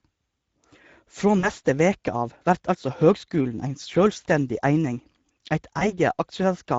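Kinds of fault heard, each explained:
Speex codec: Throughout the clip the speech carries the coarse, hoarse grain of a low-bitrate CELP coder, plainly audible and consistent with a setting around 16.8 kbps. Too few bits go to the excitation, so voiced sounds lose their clean harmonic body and pick up a noisy roughness. Unlike a transform codec's swirling, watery artefacts, this damage sits in the voice source itself and is present evenly from start to finish rather than in bursts.
VoIP packet loss concealed by the speech codec: Twice the decoder had to invent missing audio, first from 1.39 to 1.50 s just before "veke av vert altså", covering about 40 ms of lost packets, then from 5.79 to 5.95 s after roughly 20 ms was lost. Each time the last pitch and filter are stretched into a fading sound, and the speech stays weak and smeared briefly after packets return. Plain dropouts would leave silence or clicks, not this decaying fill.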